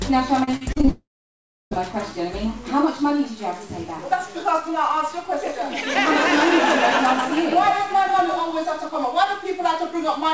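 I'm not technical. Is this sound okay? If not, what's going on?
No. From 0.44 to 0.89 s there is repeated packet loss. Seven short gaps get patched over, so the sound turns choppy.

From 0.89 to 1.81 s comes a long network dropout, likely. The sound briefly buzzes on, then goes mostly silent, and the missing part never returns.

From 5.43 to 8.89 s there's a doubled audio track, likely. A quieter copy trails about 150 ms behind, giving a sharp echo that starts and stops abruptly.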